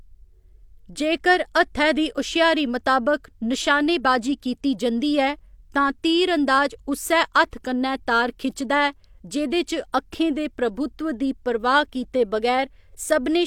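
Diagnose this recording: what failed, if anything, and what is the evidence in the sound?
Nothing failed in this recording.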